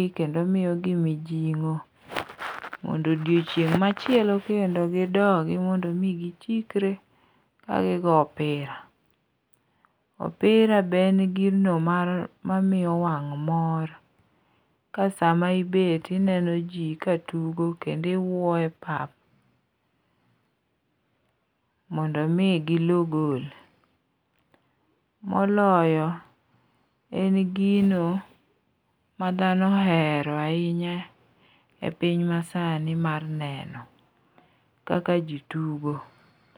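No technical faults can be heard in this recording.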